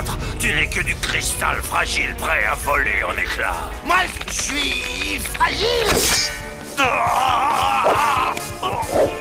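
No technical faults can be heard anywhere in the audio.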